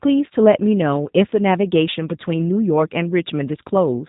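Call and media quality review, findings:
Speech rough, slightly synthetic, throughout; nothing above 4 kHz. G.729 codec, plainly audible damage. Voice rebuilt from vocal tract filter, pitch predictor and sparse pulses per 10 ms frame; sound fits an 8 kbit/s G.729A link.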